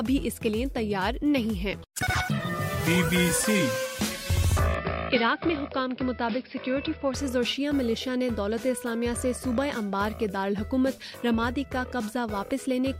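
Between 4.74 and 7.14 s the input likely switched to a poorer device, cutting all above 5.4 kHz, so the sound dulls without a gap.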